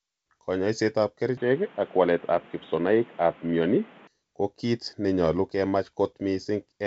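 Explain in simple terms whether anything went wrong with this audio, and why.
From 1.37 s to 4.07 s the speech turns dull and boxy. Nothing above 3.8 kHz gets through, the loudness shifts a little, and a faint new background noise appears. It then clears with no gap. The likely cause is an input switched to a poorer device partway through recording.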